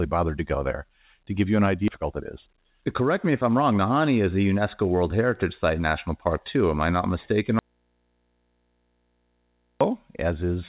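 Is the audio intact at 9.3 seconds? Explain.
No: an audio dropout to a faint residue spans 7.59 to 9.81 s. Speech cuts out abruptly to faint mains hum, likely from a still-live open input.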